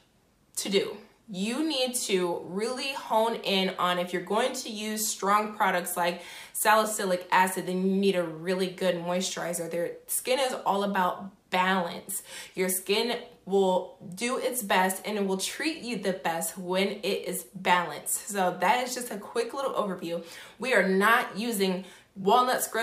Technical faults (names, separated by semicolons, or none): none